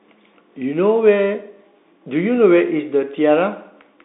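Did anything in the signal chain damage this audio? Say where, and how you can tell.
Yes. A Bluetooth CVSD headset codec, at the codec stage, shapes the speech from start to finish. The band stops at about 3.7 kHz, with nothing above 3.8 kHz and little below 200 Hz. That narrowband edge fits a 64 kbit/s one-bit CVSD link. The damage is plainly audible. Each sample only steps up or down, so loud high-frequency sounds outrun the adaptive step and distort, s sounds turn scratchy, and a granular hiss sits under the speech throughout.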